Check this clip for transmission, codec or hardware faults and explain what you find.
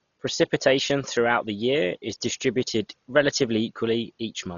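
One codec fault runs through the whole recording.

Dolby Digital compression, from start to finish: the speech likely passed through an AC-3 style encoder at a very low bitrate, with damage heavy enough to suggest something near 32 kbps. Starved of bits, the coder cut the band so that nothing remains above 6.9 kHz, and left many frequency lines without mantissa data, which the decoder filled with dither noise. The result is dull, muffled speech wrapped in a rough, fluttering hiss around its tonal parts.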